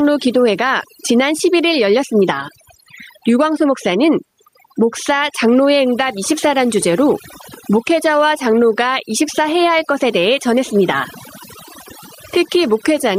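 From start to finish the speech carries overdone noise removal. The reduction was pushed hard enough that narrow frequency bands are cut to nothing whenever they sit near the estimated noise floor, and the softer parts of the voice are cut with them. The background collapses into near silence dotted with chirping, twinkling specks. Plain low-bitrate coding smears detail more evenly; here the damage follows the noise floor.

Also running through the whole clip, gain pumping leaves the level swinging by around 10 dB. Loud and soft syllables sit squashed close together. The likely cause is input gain set far too high, with a fast limiter or compressor clamping down on each loud sound. This differs from the noise removal above: pumping moves the whole level up and down, while noise removal cuts single frequency bands.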